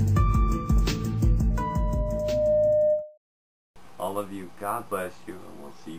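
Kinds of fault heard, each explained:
Loudspeaker feedback squeal: a 609 Hz tone looping between microphone and speaker swells over about a second to about 5 dB above the sound, unlike a steady tone.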